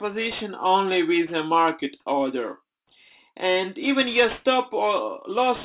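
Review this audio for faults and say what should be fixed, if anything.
Aliasing runs throughout: the audio was downsampled without low-pass filtering first, which points to an 8 kHz rate. Content above 4 kHz folds back as unrelated, metallic grit roughly 20 dB below the signal. A spectrogram shows energy slammed against a 4 kHz ceiling with mirrored streaks below it. Prevent this by using a resampler that low-pass filters below the new Nyquist limit before decimating.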